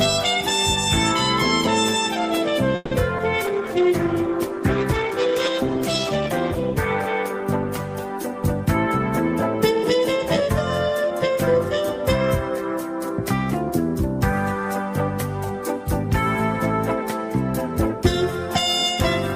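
At 2.75 s a call audio freeze begins, likely because packets were held up in transit and the jitter buffer ran dry. The last sound carries on as a fading buzz for about 160 ms, dips briefly to near-silence, and resumes at 2.93 s exactly where it stopped, adding a gap without losing anything.

From 3.17 to 3.20 s comes a short concealed packet loss. About 40 ms of audio never reached the decoder in time, and only 10 ms was patched by extending the preceding sound before blending back. The result is a quick smear or wobble, with the passage shortened by roughly 30 ms.

Between 3.45 and 3.69 s a jitter buffer slow-down rebuilds the receiver's reserve. Single pitch periods and bits of pause are repeated over and over, adding 41 ms. Playback runs at 86% speed with pitch unchanged, so sounds are drawn out.

From 3.48 to 10.27 s a call bitrate drop follows a fall in the bandwidth estimate. The encoder goes from 48 to 15 kbps and holds the lowest rate for 2.51 s. 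The sound turns coarse and watery, with the high frequencies dulled, until the rate climbs back.

Overlapping that, a jitter buffer speed-up runs from 9.62 to 11.84 s after surplus audio builds up in the buffer. Short pitch-period slices are cut repeatedly, removing about 150 ms in total. The audio plays at 106% speed at the same pitch and sounds slightly hurried.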